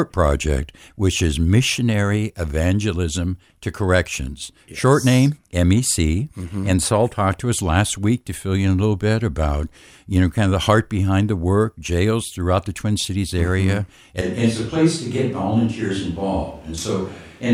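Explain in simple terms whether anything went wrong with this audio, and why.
At about 14.2 seconds the speech suddenly turns roomy and hollow and loses its low end, and stays that way to the end, though the loudness barely changes. That's likely a switch to a distant microphone, picking up the room instead of the speaker up close.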